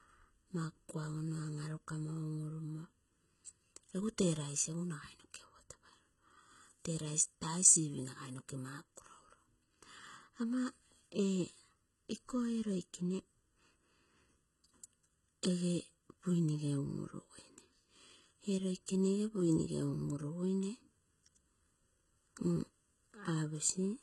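From start to finish the speech carries channel delay, which causes comb filtering. One copy of the signal runs about 0.7 ms behind the other, and the two are summed to mono. The first notch falls around 700 Hz, with further notches evenly spaced above it. The speech sounds hollow or phasey.

Heavy codec damage also runs throughout. Nothing is present above 11.8 kHz. The treble sounds rebuilt rather than real, and s sounds come out gritty, metallic or lispy. The likely cause is HE-AAC compression at a very low bitrate, about 16 kbps, with treble regenerated from lower bands.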